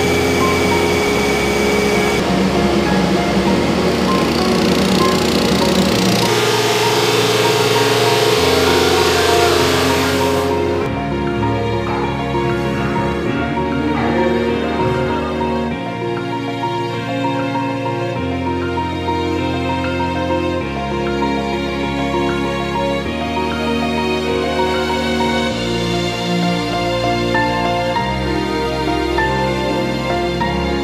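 Nothing in the audio points to a technical fault.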